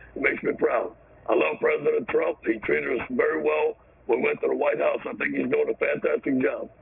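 Aliasing runs through the whole clip. The sound was downsampled without an anti-alias filter, which fits a 6 kHz target rate, so content above the 3 kHz fold frequency reflects back down as unrelated tones around 20 dB below the signal. The result is a gritty, metallic edge with the spectrum pressed hard against 3 kHz.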